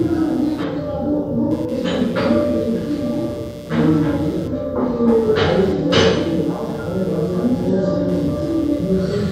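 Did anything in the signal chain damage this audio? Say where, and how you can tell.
Yes. The damage happens in the analogue wiring, as computer activity noise: a buzzing pulse train at around 150 Hz, roughly 25 dB below the sounds, runs through the whole clip and tracks the machine's processing load rather than the audio, because that load modulates the shared ground.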